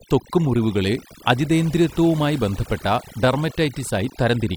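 Overdone noise removal runs through the whole recording: a noise reducer set too aggressively shuts down individual frequency bands whenever they sit close to its noise estimate. The background drops to near silence scattered with twinkling specks, while quieter parts of the speech vanish.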